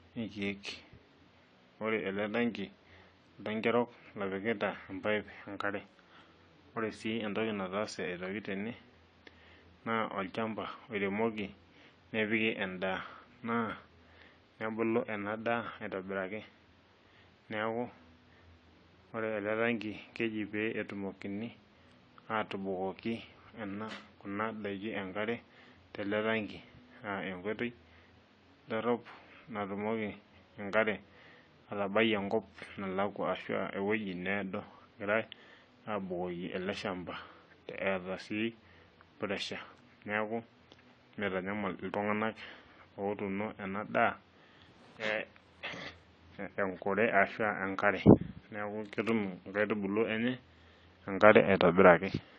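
Throughout the speech, the sound is dull and smeared, with fizzy sibilants and a warbling texture, likely AAC compression at a low bitrate near 32 kbps. From 48.85 to 49.66 s, a 46.9 Hz buzz tracks the level: a filter restarted on every block, which fits a 1024-sample block, injects a transient at each boundary.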